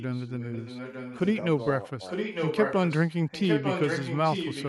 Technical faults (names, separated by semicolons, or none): echo leak